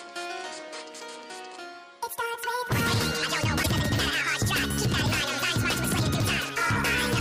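The audio jumps forward at 3.62 s, with a brief glitch lasting until 3.66 s, about two 26.1 ms MP3 frames. This is likely a broken MP3 bit reservoir: frames were lost, and the following frame decoded borrowed bytes from the wrong data. The sound skips ahead.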